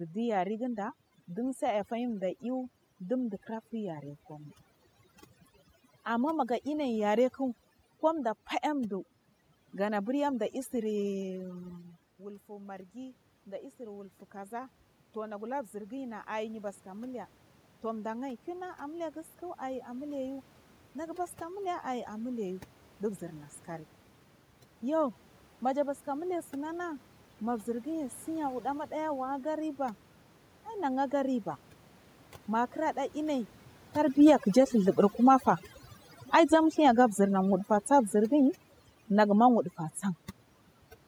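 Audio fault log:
Throughout: overdone noise removal. The noise reducer is set far too aggressively for this speech recording. Frequency bands that come close to its noise estimate are cut hard or switched off entirely, and the quieter parts of the speech are removed along with the room noise. The background drops and breaks up into twinkling, chirpy specks.
11.29 to 29.76 s: automatic gain rising. Around 11.5 s the talker moves away from the microphone, and the input level falls by about 15 dB. The automatic gain control treats this as a quiet source and raises its gain slowly, by about 16 dB over roughly 18 seconds. Speech and the residual background swell up together across that span. Because the gain restores the level gradually rather than at once, the rise is heard as a creeping increase in loudness.
34.09 to 39.69 s: automatic gain falling. Around 34 s the talker moves relative to the microphone. 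The automatic gain control responds by pulling its gain down by about 7 dB over roughly 5.6 seconds. The speech sinks steadily, with the background falling along with it. Because the gain changes gradually, the level settles lower over several seconds.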